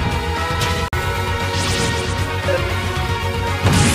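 At 0.88 s a block of digital silence cuts the audio for about 46 ms, until 0.93 s, which fits an unfilled 2048-sample output buffer. The abrupt drop and return are heard as a short hole; the waveform shows a flat line, the spectrogram a blank vertical gap with thin broadband streaks at each edge.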